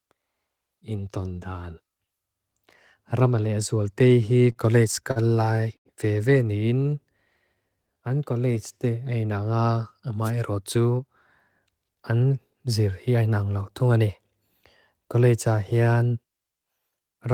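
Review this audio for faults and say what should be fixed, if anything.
From 4.33 to 5.19 s the speech picks up a repeated-stalls stutter: six short gaps where the jitter buffer ran dry and the receiver held the last sound, about 104 ms filled in total, the longest 45 ms. Nothing is lost, it just drags. A deeper jitter buffer or a steadier network path would keep this from happening.

At 5.77 to 5.88 s there's a short stall from a late packet. One packet missed its slot, so the last sound gets stretched for about 85 ms before playback resumes from the same spot, giving a held moment. Giving the buffer a little more headroom for late arrivals would prevent it.

Between 7.55 and 8.78 s you get a jitter buffer slow-down. The receiver repeated single pitch periods and pause fragments to rebuild its reserve, adding about 149 ms, so the speech runs at 89% speed at unchanged pitch and sounds drawn out. 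Tuning the buffer to refill more gradually, mostly during pauses, would make this far less noticeable.

There's a wireless microphone noise hit at 10.23 to 10.31 s, a quick swish of static as the FM link faded and receiver noise came up over the signal. Moving the receiver antenna or using diversity reception would prevent those dropouts.

Then two jitter buffer speed-ups: 10.75 to 11.08 s at 113% speed, cutting roughly 50 ms, and 11.60 to 13.15 s at 109%, cutting roughly 150 ms. The receiver trimmed short pitch-period chunks to shed excess delay, so the speech sounds hurried without any pitch change. Smoothing packet delivery upstream, so packets don't arrive in bunches, would stop the buffer from overfilling and needing to catch up.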